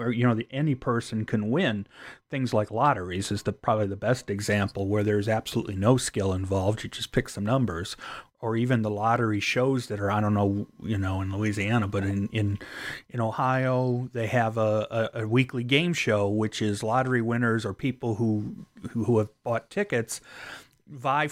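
From 0.00 to 4.37 s the speech has de-emphasis applied wrongly: a treble-cutting curve meant to undo pre-emphasis was applied to a signal that never had that boost, or was applied twice. The response falls gradually with frequency, reaching about 8 dB down at 10 kHz relative to 1 kHz, so consonants lose edge and the sound turns dull and muffled. Unlike a low-pass filter or band-limiting codec, there is no abrupt cut-off. The top end is gently tilted down, not removed.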